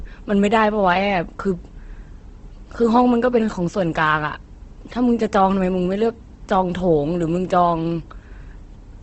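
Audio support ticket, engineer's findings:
Speech throughout: grainy, rough, noisy texture; nothing above 8.2 kHz. Likely Opus compression in music (CELT) mode, wideband, consistent with roughly 16 kbps. Bands starved of bits, filled by folding or noise.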